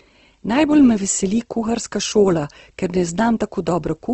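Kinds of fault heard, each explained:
Opus compression: plainly grainy, rough speech with nothing above 8.2 kHz, likely Opus in CELT mode at around 16 kbps, noise-filling the starved bands.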